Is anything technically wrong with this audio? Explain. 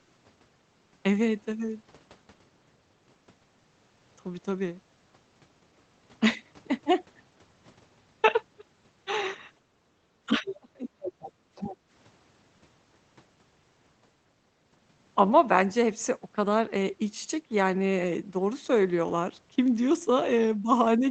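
Yes, there's a short burst of echo-canceller trouble between about 9.6 and 11.9 s, heard through what sounds like a low-rate Opus call with the top end cut around 8 kHz.

Background gated by the echo canceller: at 9.63–9.75, 11.37–11.54 and 11.76–11.89 s, the canceller clamps the mic while the loudspeaker plays, so the room tone briefly dips by about 7 to 8 dB.

Speech suppressed in double talk: from 10.26 to 11.09 s, the talker drops away deeply, likely because both sides talked at once and the canceller turned both down.

Other side's voice leaking through: at 10.36–10.54, 11.05–11.32 and 11.55–11.76 s, a second voice, roughly 10 dB under the talker, slips in, likely loudspeaker echo the canceller missed.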